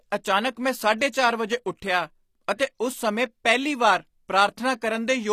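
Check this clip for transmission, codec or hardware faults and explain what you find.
Two codec faults are audible: HE-AAC compression damage throughout, and one pre-echo.

Across the whole speech clip, plainly audible HE-AAC compression is the likely cause of treble that sounds gritty and lispy on s sounds. Only the lower spectrum is truly coded. The highs are copied up from below, so their harmonics misalign, and nothing reaches above 14.9 kHz. The damage fits a bitrate around 24 kbps. A plain lowpass would sound dull rather than metallic.

From 2.56 to 2.60 s, a pre-echo puts a short hiss about 31 ms ahead of a sharp attack, which sounds softened. The codec spread noise meant for the loud onset across its whole block, including the quiet part just before it. Unlike an echo or reverb, the smear comes before the sound, not after.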